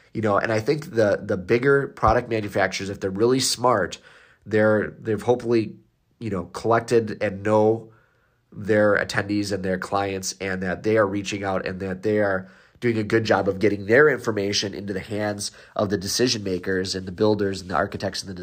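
Listening to the recorded speech turned up nothing that stood out as a technical problem.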